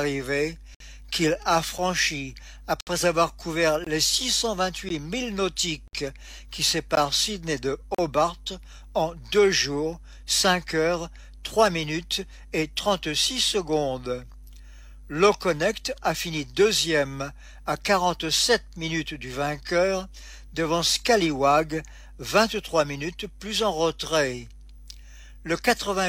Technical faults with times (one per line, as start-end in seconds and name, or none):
0.75-0.80 gap between stream segments
1.78 gap between stream segments
2.81-2.87 gap between stream segments
3.84-3.87 gap between stream segments
4.89 gap between stream segments
5.88-5.93 gap between stream segments
6.95 gap between stream segments
7.95-7.99 gap between stream segments